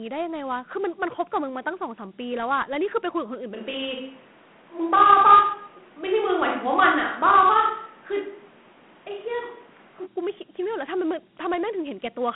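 Speech runs through Dialogic VOX ADPCM for the whole clip. The 32 kbps rate fits 4-bit samples at 8,000 per second. The band sits between roughly 150 Hz and 3.4 kHz, with nothing above 3.9 kHz. What separates this from a plain telephone-band filter or clean G.711 is the plainly audible grit: a coarse hiss that rides on the speech and tracks its loudness, because each 4-bit step only roughly follows the waveform. From 3.55 s to 10.05 s the sound turns abruptly roomy and hollow, thinner in the low end, with room noise only about 30 dB below the speech. The likely cause is a switch to a distant microphone, such as a camera's, after the close one dropped out. The level barely changes, so this is not a simple gain drop. The change is sudden in both directions at 3.55 s and 10.05 s rather than gradual, so it is not a talker moving away from the microphone.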